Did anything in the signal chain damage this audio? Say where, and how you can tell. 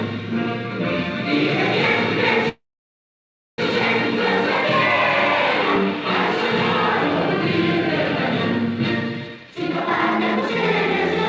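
Yes. At the network and jitter-buffer stage, a call audio freeze runs from 2.49 to 3.60 s. The last sound is carried on as a fading buzz that falls to silence for most of the gap, about 0.99 s of it. When the audio resumes it picks up exactly where it stopped, so nothing is lost; about 1.1 s of filler has been inserted instead. That pattern points to late packets, which likely drained the buffer.

From 9.28 to 10.63 s there is a jitter buffer speed-up. The sound plays at 159% of normal speed while its pitch stays unchanged, so it comes across as hurried. This happens when the buffer is holding more audio than its target after a backlog of packets lands together. The receiver then trims short pitch-period slices over and over, removing roughly 0.7 s in total, to pull the delay back down. This is all happening on a G.722 call path that carries nothing above 8 kHz.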